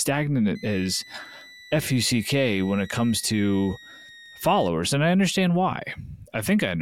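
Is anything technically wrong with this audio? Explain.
Yes, there's a switching supply whistle from about 0.55 to 4.68 s. A switching power supply running in an audible burst mode or beating with another one puts a thin tone near 2 kHz, wandering between about 1.84 and 2.03 kHz, roughly 25 dB under the speech.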